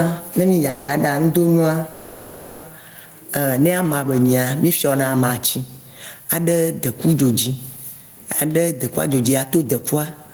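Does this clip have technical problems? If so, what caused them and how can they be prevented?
Yes. Gain pumping runs through the whole speech clip: the level ducks by around 15 dB under each loud sound, squashing loud and soft together. This is likely an input gain set far too high, with a fast limiter repeatedly clamping it. Unlike plain steady compression, the gain keeps swinging with each loud sound. Lowering the microphone gain so the limiter rarely engages prevents it.

Two call audio freezes occur, from 0.69 to 0.90 s and from 1.92 to 2.65 s. The last sound is stretched into a fading buzz or hiss for 190 ms and then 710 ms, and speech resumes where it stopped, so nothing is lost. The likely cause is delayed packets emptying the jitter buffer. Unlike a dropout, the gap is filled rather than silent or cut. A steadier network path, or a deeper jitter buffer, prevents it.

From 8.90 s to the end, a jitter buffer speed-up plays speech at about 107% of normal rate. 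Short pitch-period pieces adding up to about a tenth of a second are removed, so it sounds hurried at unchanged pitch, unlike a sample-rate error, which would also raise the pitch. Avoiding delay spikes that make packets arrive in bursts prevents it.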